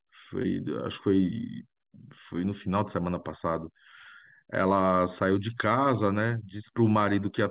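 At 0.42 s there's a short concealed packet loss: about 20 ms never arrived, so the decoder extended the preceding sound across the hole, leaving a brief smear.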